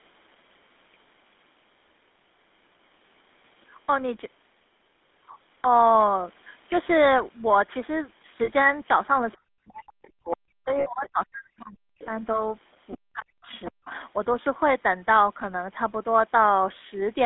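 Speech throughout carries a buzzy, gravelly roughness and a narrow, boxed-in tone, with nothing below about 200 Hz or above 3.6 kHz. That is the GSM full-rate codec: a modelled vocal tract driven by sparse, regularly spaced pulses, which fits the 13 kbit/s full-rate coder. Twice the sound briefly freezes into a rough, metallic ring, from 8.44 to 8.51 s and from 10.80 to 10.88 s. These are lost GSM frames, 40 ms and then 60 ms, where the decoder repeated the last good frame to fill the gap. From 9.36 to 12.03 s, and again from 12.97 to 13.50 s, the talker dips, falling as far as about 40 dB at the deepest. This is likely speech suppressed in double talk, with an echo canceller turning down the talker while both ends spoke at once. Scraps of another voice, roughly 20 to 25 dB below the talker, come through at 10.31, 12.92 and 13.18 s, with a longer stretch from 13.51 to 14.00 s. They are likely the other side's voice leaking through from a loudspeaker that the echo canceller did not fully remove.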